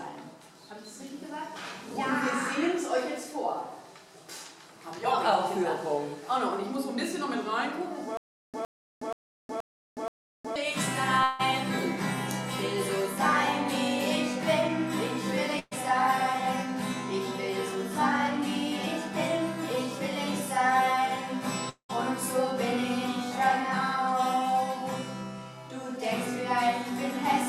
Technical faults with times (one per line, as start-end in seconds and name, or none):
8.17-10.56 stutter with silent gaps
11.23-11.41 long network dropout
15.59-15.73 burst of packet loss
21.69-21.91 long network dropout